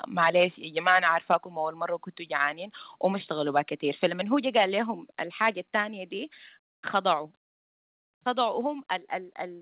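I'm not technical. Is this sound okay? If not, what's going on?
No, not quite. Two things keep happening, and they're linked.

First, microphone overload: at 0.22–0.44, 0.86–1.36, around 4.0, 4.57–4.64 and 5.42–5.49 seconds the loudest bits turn harsh and crackly. The tops of those peaks are getting chopped off, most likely because the mic input was set too high.

Second, the microphone volume stepped down in sudden jumps at 1.02, 2.04, 4.08, 5.10, 7.26 and 8.61 seconds. The whole sound, background included, drops a notch each time, likely the call software turning the mic down after those distorted peaks.

All of this is coming through a phone-style call line that cuts everything above about 4 kHz, so it has that narrow telephone sound.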